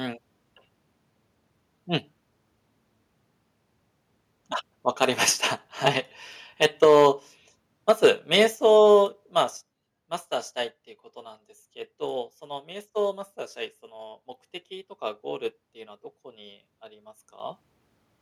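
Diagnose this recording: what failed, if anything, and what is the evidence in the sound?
Microphone overload is audible at the converter stage. Peaks flatten with a harsh, crackling edge at 5.02–5.05 s, 5.86–5.88 s, 6.62–7.07 s, 7.89–8.07 s and 8.33–8.43 s. They run about 2 to 5 dB past full scale. The worst is the 6.62 s stretch. A small share of samples in each burst is cut flat. The likely cause is an input volume set too high. The converter can't represent the loudest syllables, so their tops are sheared off.

Microphone volume stepped down three times, in the call processing stage. Speech and background drop together by about 2 dB at 6.84 s, about 3 dB at 8.55 s and about 6 dB at 9.57 s. Each drop is instant. This likely reflects the call software's automatic gain control reacting to overload. It lowers the device's input volume in single steps rather than smoothly.

Microphone volume stepped up twice, again in call processing. 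The level jumps by about 3 dB at 16.38 s, then by about 8 dB at 17.4 s. Voice and background rise together, so the change sits at the input rather than in the source. The gain control judged the input too quiet after its earlier cuts. It raised the device volume in abrupt steps, undoing its earlier reductions.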